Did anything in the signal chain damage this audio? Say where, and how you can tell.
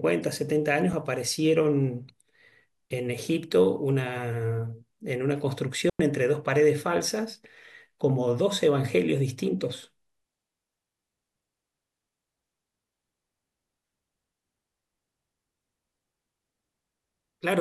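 Yes. A block of digital silence appears at 0.93 s. The speech drops to silence for about 5.3 ms and then resumes, with no fade on either side, and the whole event reads as a tick. The abrupt gap points to the driver or buffer stage, where a block of output missed its deadline and went out empty. Its length fits a 256-sample buffer.

A digital wireless dropout runs from 5.90 s to 6.00 s. The speech mutes for about 99 ms and then returns, leaving a clean hole of near silence. The edges are softened by a very short fade rather than snapping, and there is no burst of noise on either side. That fits a digital wireless link losing too much data and the receiver muting itself until the stream recovers.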